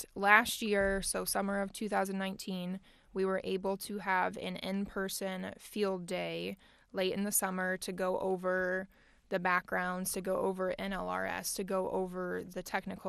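From start to finish the speech sounds dull, with upper frequency bands flickering in and out and a gurgling, granular roughness on what remains. This is most likely MP2 compression at a rate around 80 kbps. Unlike a fixed low-pass filter, its high-frequency limit keeps shifting.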